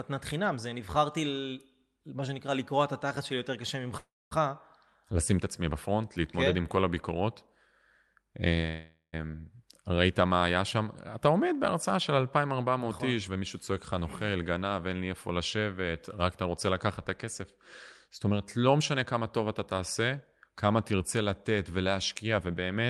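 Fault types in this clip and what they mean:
Call audio freeze: Packets were likely held up in transit, so the jitter buffer ran dry. The receiver stretched the last sound into a fading buzz or hiss and then silence, at 3.97 s for 0.34 s and 8.68 s for 0.45 s, with nothing lost afterwards.
Jitter buffer speed-up: After a backlog built up, the receiver repeatedly trimmed short pitch-period slices to cut delay. The sound runs 8% fast at unchanged pitch from 13.28 to 14.44 s and 18.09 to 19.40 s, and 15% fast near the end.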